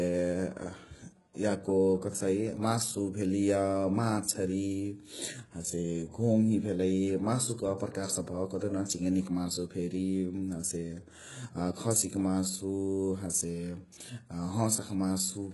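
HE-AAC compression affects the speech from start to finish. Nothing reaches above 11.5 kHz, and the treble that is present sounds synthetic: s sounds come out gritty and lispy, with a metallic edge. This is likely the work of spectral band replication, where lower bands are copied upward under a coarse envelope, so the upper harmonics fail to line up with the real ones below. The damage is heavy, which fits a bitrate around 12 kbps.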